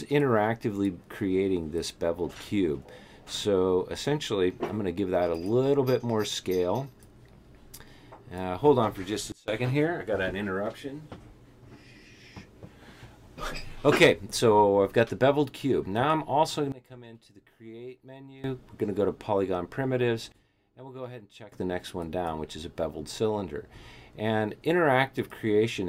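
At 9.32 s the level drops by about 24 dB, recovering at 9.48 s. At 16.72 to 18.44 s and 20.32 to 21.52 s it falls about 18 dB. Sound and background fall together. These are sudden gain jumps, likely unramped digital gain changes.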